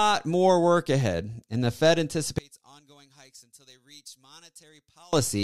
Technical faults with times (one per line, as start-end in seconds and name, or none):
2.38-5.13 one channel inverted